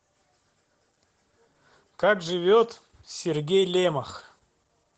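From start to finish the speech carries Opus voice compression, and it's plainly audible. The top end stops around 8 kHz, so sibilants and breath lose their air, which fits the wideband SILK mode. The coarse coding of the excitation at what sounds like roughly 12 kbps makes the voice a bit muffled and hoarse, with a faint robotic edge. Any background behind it burbles rather than sounding clean.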